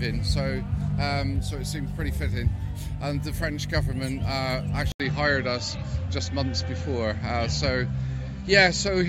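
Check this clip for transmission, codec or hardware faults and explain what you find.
One fault stands out. At 4.92 s the audio drops out for about 80 ms, then returns duller and boxier through to the end, with nothing above 7.6 kHz and a new, faint noise floor sitting far below the signal, while loudness stays about the same. This is likely an input switched to a poorer device: the system swapped microphones mid-recording to one with a narrower band and its own coloration and background noise.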